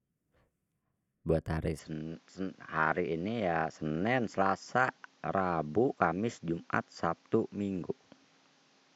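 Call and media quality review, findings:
Input switched to a poorer device, 1.79 s to end. Speech abruptly dulls, nothing above 7.6 kHz; new faint noise floor roughly 35 dB below speech; no gap, level unchanged. Likely capture moved to a narrower-band microphone.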